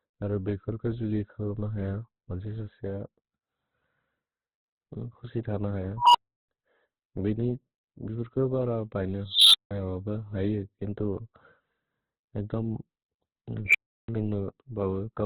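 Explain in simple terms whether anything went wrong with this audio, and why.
Two things went wrong with this speech. The whole clip sounds narrow, muffled and grainy. That points to heavy Opus compression as the likely cause. The encoder was short of data, so it dropped the higher frequencies and filled gaps with rough noise.

Three times, a beep swells fast, gets very loud, then cuts to silence. This is an unstable filter: a sound-shaping stage feeding back on itself until its numbers overflow. It happens at 5.97 to 6.49 s with a tone near 1 kHz. It happens again at 9.28 to 9.71 s, just after "बर बैने", with a tone near 4 kHz. The last one is at 13.65 to 14.09 s, near 2 kHz. Each beep builds for about a tenth to a quarter of a second. The silence after each one lasts about a fifth to a third of a second.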